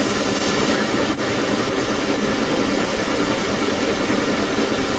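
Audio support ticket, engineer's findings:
Echo leak, full clip from 0.0 s to end: delayed copy of the speech trailing the direct signal by about 0.31 s, at roughly 10 dB relative to the speech. Likely cause is far-end loudspeaker playback reaching its microphone and passing an incompletely converging echo canceller, which returns it up the call path. Echo shares the 8 kHz band limit of the Opus link.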